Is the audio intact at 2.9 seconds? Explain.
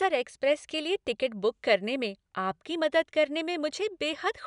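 Yes, the audio is intact at 2.9 seconds, with no dropout, glitch or other fault at that moment.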